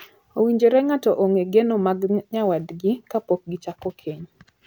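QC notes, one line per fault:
No faults heard anywhere in the speech.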